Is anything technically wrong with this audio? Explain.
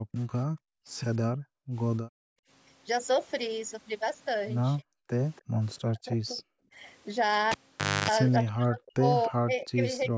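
Yes. Several call-path faults affect this speech clip.

From 0.0 to 2.49 s, and again from 5.42 to 6.75 s, the background is gated by the echo canceller. The canceller clamps the microphone while the loudspeaker plays, so the room tone drops by about 40 dB for roughly a second and a half in the first stretch and a fraction of a second in the second, then comes back.

Between 4.78 and 6.78 s, and from 8.42 s to the end, the talker's speech dips in pieces, by up to around 40 dB. This is likely speech suppressed in double talk: with both sides talking at once, the canceller could not separate near speech from echo and turned everything down. The losses add up to a few tenths of a second in the first span and about a second and a half in the second.

From 5.36 to 6.42 s, and briefly at about 9.24 s, a faint delayed copy of the speech trails 283 ms behind, at roughly 30 dB and then 20 dB below it. 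This is likely echo leak, where a far-end canceller on a loudspeaker let part of the returned signal through.

From 7.51 to 8.10 s, a cable is pulled and plugged in. A pop is followed by about half a second of near silence. While only the plug tip made contact, roughly 0.28 s of 50 Hz mains buzz comes through, and a second pop marks the sound's return. Nothing is heard above 8 kHz, as expected from the call microphone processing.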